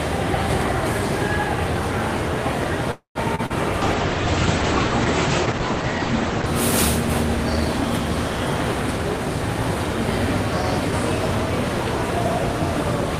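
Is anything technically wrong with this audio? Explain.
Yes. Three kinds of fault cluster between about 2.9 and 6.6 seconds.

From 2.91 to 3.18 s there is a call audio freeze. The sound stops moving forward. The last sound is stretched into a fading buzz or hiss, then about 0.12 s of silence. The likely cause is packets held up in transit until the jitter buffer ran dry. When they arrive, the audio resumes where it left off. Nothing is lost, but everything after runs about 0.24 s later.

Right after come two short concealed packet losses, at 3.35 s and 3.46 s. Each time, about 40 ms of audio never reached the decoder. The receiver patched about 32 ms and 35 ms by extending the previous sound, then blended back into the real signal. Each one is heard as a brief smear or wobble. A short, sharp detail at those moments can disappear.

From 3.82 to 6.56 s there is a call bitrate drop. The encoder was pushed from 32 kbps down to 10 kbps. 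It stayed at the lowest rate for about 2.7 s. At that rate the coding gets coarse and the audio band shrinks from 20 kHz to 8 kHz. The sound turns dull and muffled, with a rough, watery texture. Full brightness returns once the rate recovers.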